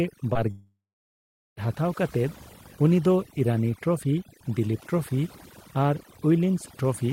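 Overdone noise removal runs the whole way through: bands near the noise floor get pushed right down, so the background drops and breaks up into twinkly specks. At 0.33 to 0.37 s there's a short concealed packet loss, about 20 ms that never arrived, patched by stretching the previous sound, so you hear a quick smear or wobble. Then from 0.51 to 1.59 s the speech gives way to a fading buzz or hiss, then roughly 0.8 s of near silence, before coming back with a chunk missing, likely a long network dropout.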